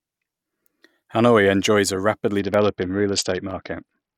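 At 1.65 s there's a sharp single click, and again at 2.54 and 3.51 s, likely dropped samples, each a fraction of a millisecond missing so the waveform jumps. From 2.39 s to the end the speech goes dull and gritty. That's a Bluetooth SBC bit pool drop, consistent with the bit pool falling from 31 to 7, around 61 kbps, starving the treble.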